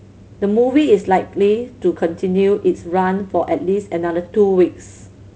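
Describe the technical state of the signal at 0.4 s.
At 0.4 s the speech signal is intact, with no fault to be heard at that moment.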